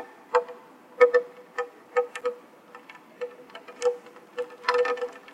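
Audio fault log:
2.18–2.23 s, damaged data in a compressed stream: a brief glitch of about 44 ms breaks into the sound. Corrupted bytes in the encoded stream made the decoder misread those frames and lose sync, spitting out garbled output until it locked onto the next valid frame header.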